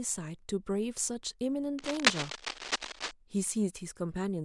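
From 1.79 to 3.11 s there's cable scratch noise, uneven scratchy bursts about as loud as the speech, likely from a worn cable or connector being moved.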